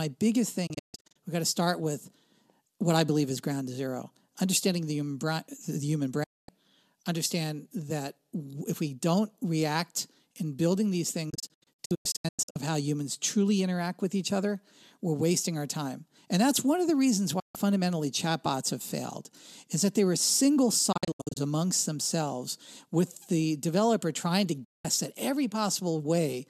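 Digital broadcast dropouts mute the speech six times: 0.67–1.16 s, 6.23–6.49 s, 11.30–12.56 s (after "react in building these"), 17.39–17.55 s, 20.92–21.37 s and 24.64–24.85 s. The receiver lost frames and muted, sometimes in scattered holes, fading out and back in over about 8 ms until good frames returned. The gaps come in steps that fit 24 ms frames.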